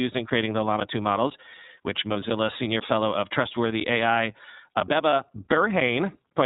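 From the start, the speech carries plainly audible iLBC codec damage: nothing above 4 kHz, and a rough, slightly synthetic edge, which fits the 30 ms-frame mode at about 13.33 kbps. Each frame is coded independently.

From 0.3 s to 6.31 s, periodic USB or driver dropouts cut out roughly 10 ms of sound every 0.5 s, about fifteen times, leaving brief silences. They sound like evenly spaced ticks, heard only while there is signal. Their strict regularity separates them from random packet loss.

At 2.12 to 2.16 s and again at 5.09 to 5.13 s, a single lost iLBC frame of 30 ms is concealed by repeating the last pitch cycle mixed with noise. Each sounds like a short held, buzzy vowel rather than a click or silence, and the voice is right again almost at once.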